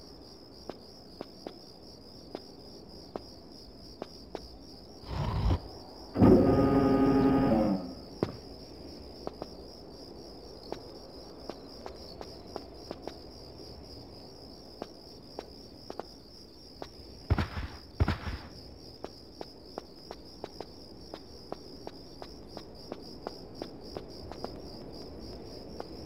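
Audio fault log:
throughout, sample clock jitter: the converter's clock wanders by a few microseconds, so each sample lands a little early or late at random. Where the waveform changes fast, that timing slip becomes an amplitude error, here around 35 dB below the signal. The result is a fine hiss and grainy roughness riding on the sound, strongest on loud and bright passages and falling away to nothing in silence.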